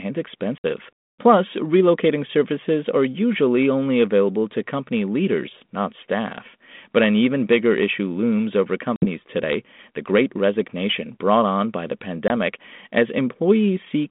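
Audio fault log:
0.58–0.65 s, 8.96–9.06 s (between "bigger issue looms over" and "today the great resignation") and 12.28–12.31 s, packet loss on an ADPCM call: about 60, 60 and 20 ms drop to silence, a few packets then one. The waveform shows flat, hard-edged gaps and the spectrogram shows blank vertical slots across the 200 Hz–3.6 kHz G.726 band. The decoder's predictor and step size lose track of the sender's, so speech resumes slightly distorted before settling.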